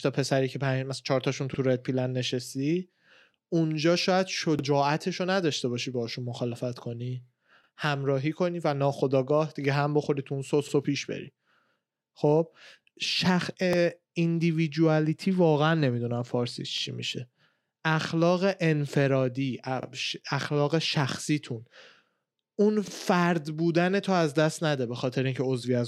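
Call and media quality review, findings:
Overlapping chunks: 3.0 s processing blocks each restart about 48 ms early, replaying that slice. Stutter-clicks at 1.54, 4.59, 7.64, 10.69, 13.73, 16.78, 19.83, 22.88 s.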